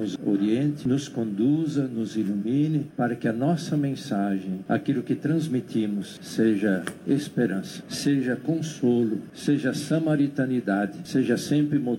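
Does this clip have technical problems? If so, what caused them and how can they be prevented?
No, there are no technical problems here: the signal stays continuous all the way through, so there is nothing to trace to a cause or to prevent.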